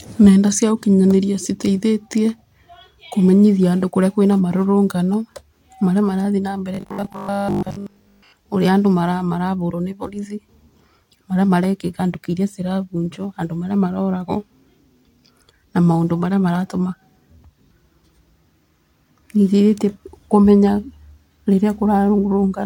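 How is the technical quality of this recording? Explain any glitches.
The recording has one glitch. From 6.75 to 8.33 s, between "marathiĩ na mbere" and "ũrĩa andũ marabũrwo nĩ", robotic sound from repeated short buffers: 20 ms repeats, likely from starved buffers, impose a fixed 50 Hz metallic buzz. Unlike a stutter, the speech keeps flowing roughly.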